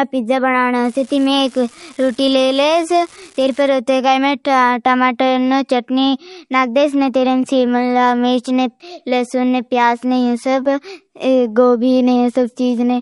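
An unreliable data bit runs from 0.85 to 3.68 s, just after "पीजा बनाना", in this speech clip: one marginal data line flips its bit on random samples, giving a steady crackle of equal-sized spikes that continues through pauses. MP3 compression is the likely cause of the watery, swirling texture heard throughout, with nothing above 11.2 kHz, which fits a low bitrate of around 48 kbps. Starved of bits, the encoder drops weak frequency lines frame by frame and cuts the treble.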